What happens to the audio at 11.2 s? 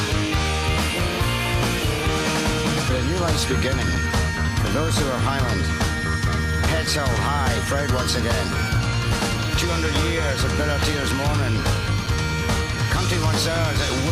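Nothing goes wrong at 11.2 s; the audio plays through that point intact, with no dropout, glitch or distortion.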